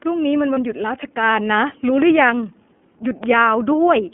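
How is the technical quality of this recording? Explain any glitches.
The recording is limited by low-bitrate codec coding, and three short glitches occur: a brief dropout near the start and two pops later on.

The iLBC codec colours the whole clip. The speech sits in a telephone band of roughly 200 Hz to 3.4 kHz, with nothing above that. Each 30 ms frame's excitation is coded on its own, and at this low rate the approximation is plainly audible: voices sound slightly rough and synthetic, which fits iLBC's 13.33 kbps mode.

Lost iLBC frames occur from 0.53 to 0.58 s, a gap of one 30 ms frame. With no data for that stretch, the decoder fills it by repeating the last pitch cycle blended with noise. The result is a brief held, faintly buzzy vowel-like smear. Because each iLBC frame decodes independently, normal speech returns immediately after the gap.

A loud pop occurs from 2.02 to 2.04 s and another from 3.24 to 3.26 s. 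Each is a single sharp transient peaking around 10 dB above the speech, and the speech continues underneath. The likely cause is a voltage step or spike, from a connector, switch, static discharge or driver glitch, entering the signal path. The following circuitry shapes it into a short click-thump.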